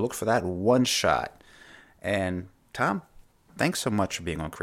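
No technical faults are audible anywhere in the speech recording.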